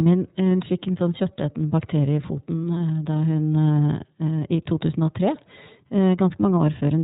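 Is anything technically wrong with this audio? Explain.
Yes. Throughout the speech, the iLBC codec is plainly audible. Each 30 ms frame's excitation is coded on its own, pointing to the 13.33 kbps mode, and nothing passes above 4 kHz. Unlike simple band-limiting, which only dulls the sound, this adds a rough, synthetic grain.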